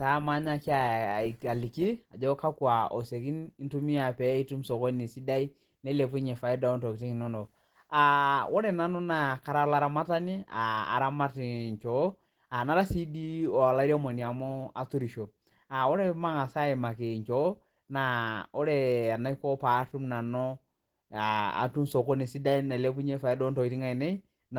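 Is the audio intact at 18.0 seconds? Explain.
No, not at 18.0 seconds, and not anywhere else in the clip, since the Opus compression damage runs start to finish. The speech has that hoarse, muffled, grainy texture of Opus dropping into its hybrid mode, where the low band is coded like speech and the upper bands are filled with shaped noise instead of real detail. It still reaches about 20.1 kHz, and the artefacts fit a likely low rate around 16 kbps.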